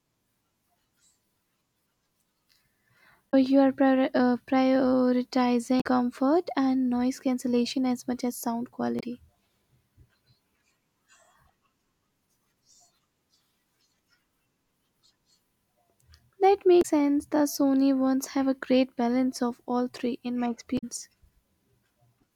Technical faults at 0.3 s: none

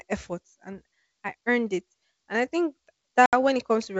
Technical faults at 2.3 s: none

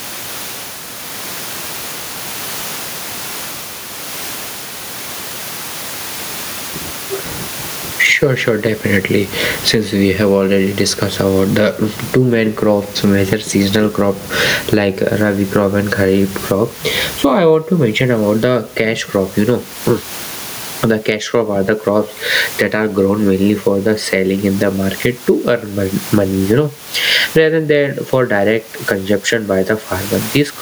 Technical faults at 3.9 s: gain pumping

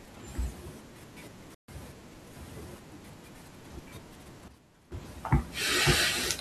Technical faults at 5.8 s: none

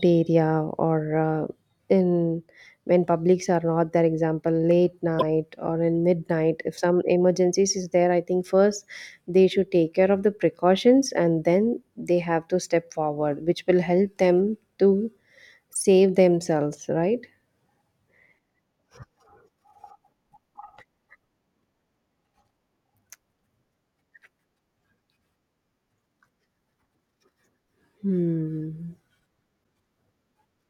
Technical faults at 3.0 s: none

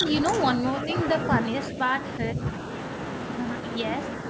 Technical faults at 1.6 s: none

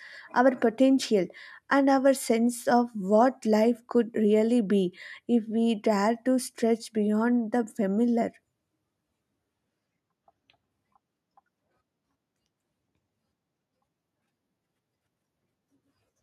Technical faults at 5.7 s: none

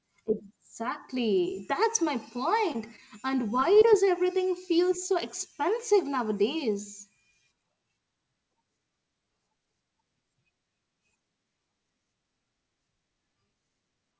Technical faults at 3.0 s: short concealed packet loss

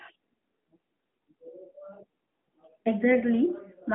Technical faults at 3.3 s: none

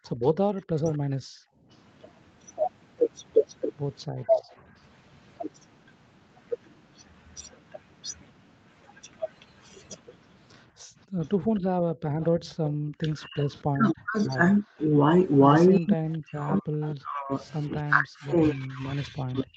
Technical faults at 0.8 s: background gated by the echo canceller; echo leak; speech suppressed in double talk

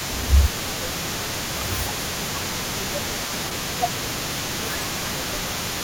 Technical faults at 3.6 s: echo leak; speech suppressed in double talk

